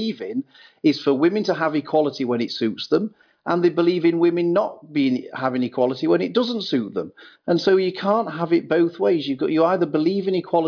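No technical faults can be heard anywhere in this recording.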